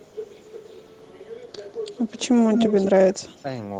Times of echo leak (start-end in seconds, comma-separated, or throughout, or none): 1.72-1.78, 2.54-2.74